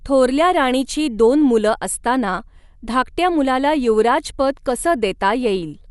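From start to finish, the speech sounds dull and band-limited. Nothing remains above about 11.5 kHz. A rough, fluttering noise clings to voiced sounds. This is likely Dolby Digital compression, with the band narrowed and starved components filled with noise, which fits about 64 kbps.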